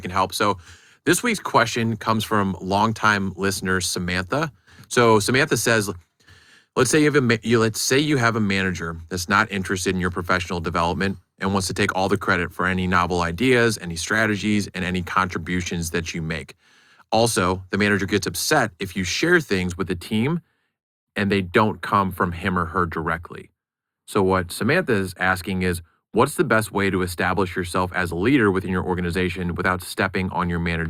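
From 19.72 s, after "upset if you share", to the end, one channel lags the other by a few samples before the two are summed to mono. This channel delay (comb filtering) cuts evenly spaced notches, the first near 7 kHz, leaving the speech dull and hollow at the top.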